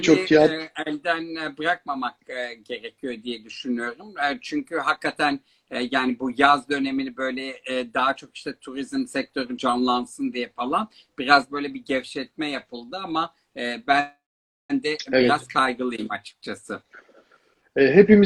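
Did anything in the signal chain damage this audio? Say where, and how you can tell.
Yes, the damage is in the network path and the receiver's jitter buffer. At 12.85 to 12.90 s there is a short stall from a late packet: the last sound is held for about 25 ms, then continues from the same point. Nothing is missing, which separates it from a dropout.

A call audio freeze runs from 14.0 to 14.72 s. The held sound decays into roughly 520 ms of silence before the audio resumes where it stopped, so about 695 ms has been inserted. Packets were likely held up in transit. It is far longer than the earlier stall.

From 17.39 to 18.19 s a jitter buffer speed-up plays the audio about 6% fast, trimming around 50 ms in small pitch-period cuts to pay back the built-up delay. The pitch stays the same, which rules out a sample-rate or resampling error.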